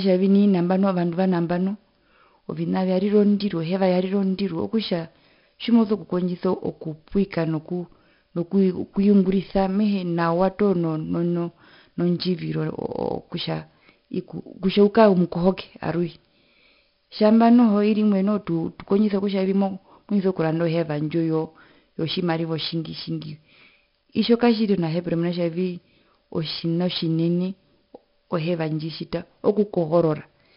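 From start to finish, the speech carries a gritty hiss that rises and falls with its loudness, roughest on the strongest syllables, with crunchy distortion on sharp attacks. Nothing is heard above 5.3 kHz, so the whole clip sounds dull. This is heavy 4-bit ADPCM compression: each sample is coded as a small step from a predicted value, and the adaptive step size lags on sudden changes. The damage fits a bitrate near 44 kbps.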